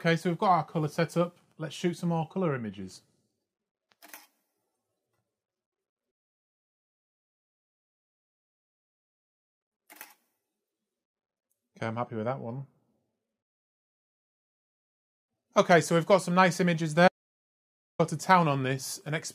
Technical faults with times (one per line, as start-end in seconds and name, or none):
17.08-17.99 audio dropout to silence